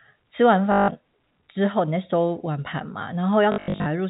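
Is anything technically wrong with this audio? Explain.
Yes. There is packet loss with the last packet repeated. At 0.72 to 0.88 s, 160 ms is lost. From 3.52 to 3.86 s, 260 ms is lost in scattered runs up to 80 ms. The player replays the previous packet. Runs buzz near 50 Hz, which fits 20 ms packets. It sounds like a brief robotic stutter.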